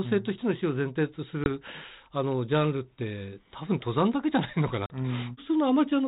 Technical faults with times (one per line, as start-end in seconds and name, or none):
1.44-1.50 packet loss on an ADPCM call
4.86-4.94 packet loss on an ADPCM call